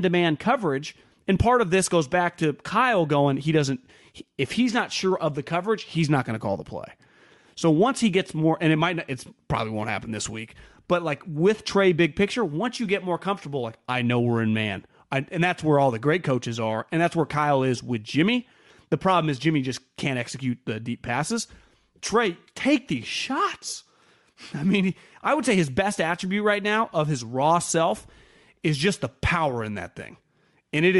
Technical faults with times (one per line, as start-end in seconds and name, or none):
0.00-31.00 Bluetooth LC3 compression